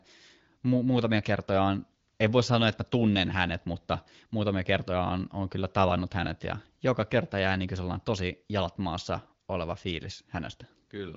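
Nothing here goes wrong: the speech comes through an HD Voice (AMR-WB) link running at 18.25 kbit/s, so it keeps that typical wideband ceiling with nothing above about 7.5 kHz, and there's no fault to point to anywhere along the way.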